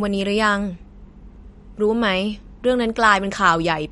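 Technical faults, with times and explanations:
Throughout, MP3 compression: nothing sounds above 11.2 kHz, and the speech has a plainly watery, swirling quality, likely from a bitrate around 48 kbps dropping weak frequency lines frame by frame. A spectrogram shows a flat ceiling at 11.2 kHz with flickering holes beneath.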